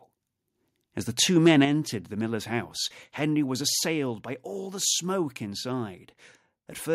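From 1.45 to 1.65 s, right after "the two", the sound turns harsh and crackly. This is microphone overload, likely from the input volume being set too high. The loudest peaks push about 4 dB past what the converter can represent, so their tops are sliced flat. Only a small fraction of samples are cut this way. The flattened waveform adds a gritty, buzzing edge to the strongest syllables in that stretch.

At 1.65 s, just before "the miller's house", the microphone volume steps down. Speech and background both drop by about 6 dB at once. This is likely the call software reacting to the distorted peak just before it and cutting the input volume in a single step. A second step down comes at 3.69 s, just before "by all the smoke". This one is smaller, about 2 dB, and is likely the same automatic adjustment. Each step is heard as a sudden, uniform drop in loudness.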